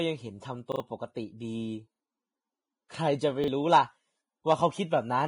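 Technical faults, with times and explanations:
Throughout, Vorbis compression: the speech sounds hissy and grainy with nothing above about 10.6 kHz, likely from heavy Vorbis coding near 24 kbps that turns treble detail into noise.
0.72–0.80 s, 1.96–2.00 s and 3.44–3.48 s, repeated buffer: brief stutters as a 40 ms slice replays with hard joins (twice at 0.72 s), because fresh audio arrived late and some following sound was skipped.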